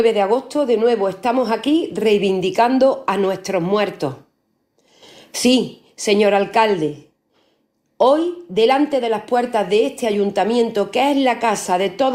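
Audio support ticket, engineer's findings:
Nothing stood out on listening to the clip, so there is no symptom to log against any component.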